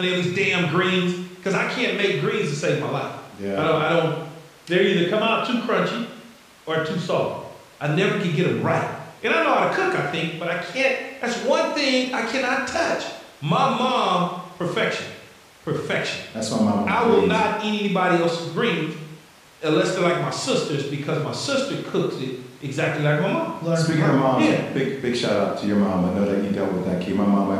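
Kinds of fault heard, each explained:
No technical faults can be heard in this recording. The speech carries on steadily, with no break, distortion or disturbance to single out.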